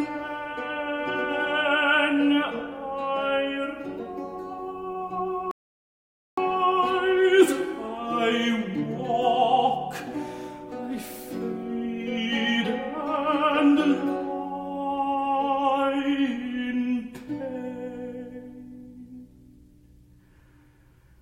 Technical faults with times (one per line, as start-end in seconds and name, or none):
5.51-6.38 audio dropout to silence